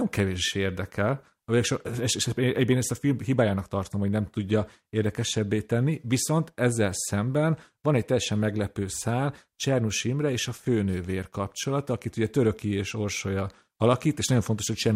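Nothing in the speech stood out as a technical problem on listening.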